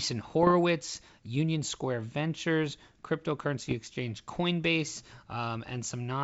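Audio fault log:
0.43–0.55 s and 3.69–3.74 s, bit errors on an ADPCM link: stray flipped bits, about 0.15 to 0.2 percent, knock the G.722 decoder's predictor and step size off track, so each hit rings on briefly as pops, rough grainy bursts and momentary level jumps in the wideband sound.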